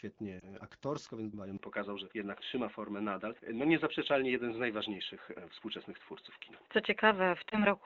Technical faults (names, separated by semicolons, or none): lost AMR speech frames; input switched to a poorer device